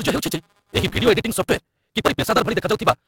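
From the start there's a block size mismatch with truncation: each block loses its tail, giving a 172 Hz buzz and speech running 1.88 times fast with its timbre intact, which fits a 256-sample read. Computer activity noise, a faint pulsing buzz around 100 Hz sitting roughly 45 dB under the speech, runs up to 1.06 s, following the machine's load rather than the talking. At 0.83 s compressed frames are skipped, so about 20 ms of audio drops out and the speech jumps ahead.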